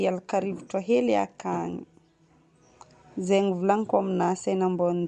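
From start to finish the speech carries plainly audible codec damage, a breathy, grainy edge on the upper register that sounds like likely Bluetooth LC3 compression. The transform coder drops much of the fine high-band detail and fills those gaps with shaped noise. The texture fits a rate near 48 kbps with 7.5 ms frames. On a spectrogram the upper band looks patchy and speckled rather than harmonic, with block structure repeating at that frame interval.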